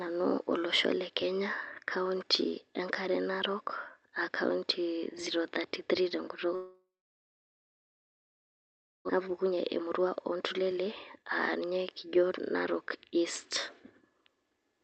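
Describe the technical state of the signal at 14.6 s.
At 14.6 s the speech is inside a jitter buffer speed-up running from 13.99 to 14.73 s. The receiver repeatedly cuts pitch-period-sized slices, about 70 ms in all, so delivery runs at 110% and sounds hurried. Unlike a resampling error, the pitch stays unchanged.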